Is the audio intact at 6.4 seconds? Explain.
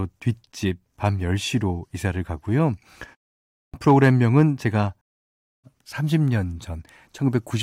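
Yes, the speech is intact at 6.4 seconds, with no fault at that moment.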